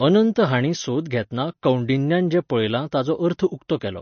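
Speech here, with MP3 compression audible throughout: nothing above 6.5 kHz, and a watery, swirly smear, likely from a bitrate around 32 kbps starving the encoder.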